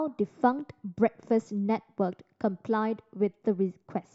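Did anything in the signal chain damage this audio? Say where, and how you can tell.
No, no chain damage heard.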